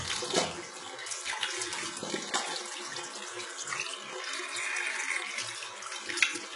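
From start to finish the audio carries heavy damage of the kind HE-AAC compression likely leaves at a very low bitrate, consistent with roughly 12 kbps. Only the lower band is truly coded. The treble is copied up from below and shaped coarsely, so high detail sounds gritty and metallic rather than natural. A spectrogram would show smeared, blocky upper bands that repeat lower patterns, and nothing above 11.1 kHz.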